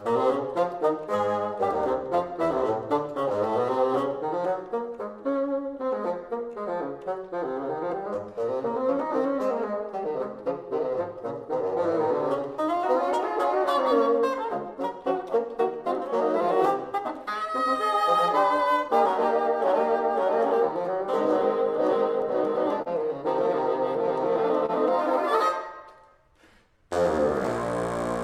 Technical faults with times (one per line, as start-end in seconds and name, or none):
0.00-28.23 clock drift between sender and receiver
0.60-20.92 repeated timing corrections
22.82-22.88 short stall from a late packet
24.66-24.71 short stall from a late packet